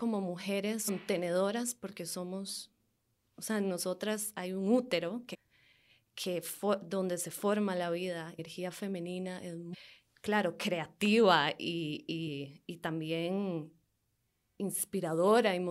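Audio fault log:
0.87 s, 5.33–5.35 s, 8.38 s and 9.73–9.75 s: damaged data in a compressed stream. Corrupt bytes make the decoder misread frames and hunt for the next header, so the speech breaks into brief chirps or blips.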